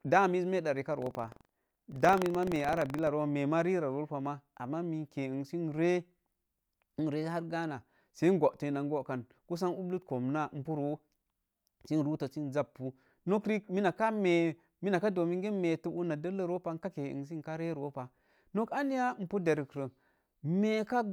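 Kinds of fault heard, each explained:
Buffer tearing: from 0.98 to 3.08 s the speech carries a steady robotic rattle at about 23.4 Hz, which fits a 2048-sample buffer being overtaken by its reader once per lap. Each lap, a small slice of audio from roughly 150 ms earlier is spliced in with hard joins on both sides. Unlike an underrun, nothing drops to silence; the rattle rides on the signal itself, so it vanishes wherever the speech pauses.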